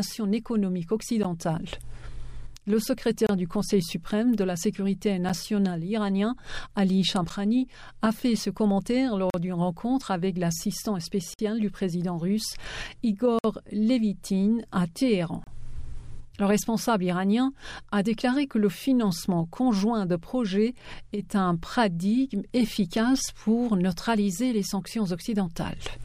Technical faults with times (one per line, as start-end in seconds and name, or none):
1.23 gap between stream segments
3.27-3.29 gap between stream segments
7.29 gap between stream segments
9.30-9.34 gap between stream segments
11.34-11.39 gap between stream segments
13.39-13.44 gap between stream segments
15.44-15.47 gap between stream segments